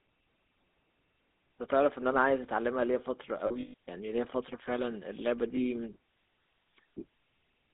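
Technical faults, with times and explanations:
throughout: GSM full-rate codec. The voice carries a buzzy, gravelly roughness, plainly audible, because the codec rebuilds speech from a vocal-tract filter driven by sparse, regularly spaced pulses. That damage is consistent with a 13 kbps full-rate coder. On a spectrogram, energy is confined to a band from about 250 Hz to 3.7 kHz with nothing above, and the harmonics look coarse and smeared instead of cleanly striated.
3.46–3.74 s and 5.56–5.61 s: lost GSM frames. In the first stretch, about 180 ms of audio is missing across roughly 280 ms, with the longest gap around 150 ms. The missing frames were filled by repeating the last good frame's settings, so the sound freezes into a rough, metallic ring. The second dropout is a single 20 ms frame. On a spectrogram, the gaps show as frozen, horizontally smeared bands.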